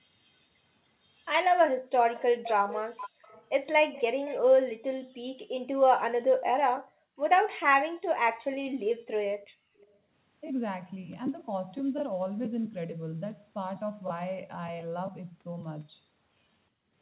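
Faint, delayed copies of the speech trail behind it at 2.14 to 2.22 s, 2.44 to 2.50 s, 2.97 to 3.47 s, 3.93 to 4.03 s, 4.25 to 4.38 s and, very quietly, 9.78 to 9.86 s. They lag the original by 367 ms, sitting roughly 15 to 35 dB below it. This is echo leak, likely from a loudspeaker on the far end whose echo canceller let scraps of its microphone pickup slip back into the call.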